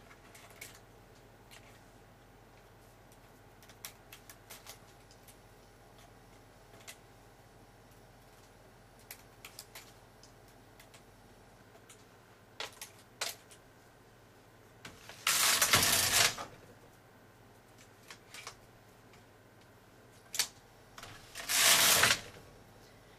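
Listening through the recording, nothing stood out as a technical problem.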